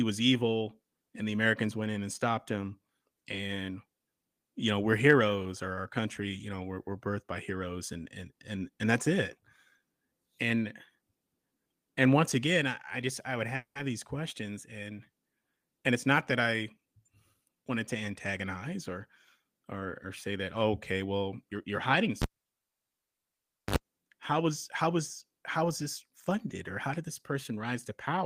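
A speech recording with four kinds of technical fault. At 13.55 s packets were likely held up in transit and the jitter buffer ran dry, causing a call audio freeze: the last sound is carried on as a fading buzz or hiss that drops to about 110 ms of silence before speech resumes at 13.78 s. Nothing is lost, but the 200 ms gap adds that much delay. To work off built-up delay, the receiver trims short pitch-period slices in quick succession, a jitter buffer speed-up. From 15.92 to 17.70 s speech runs at 111% of normal speed with pitch unchanged, sounding hurried as about a fifth of a second is removed. A milder pass from 27.03 to 28.15 s runs at 104% and drops only a few hundredths of a second. At 22.22 s a live cable is pulled and plugged in again. A pop is followed by near silence lasting 1.42 s, a brief 51 ms burst of 50 Hz mains buzz as the tip makes contact, and a second pop as sound returns at 23.76 s. 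Inside that dropout, at 22.32 s, a packet arrived late and the receiver stretched the last sound for 60 ms until it came, a short stall from a late packet that holds the sound slightly too long while losing nothing.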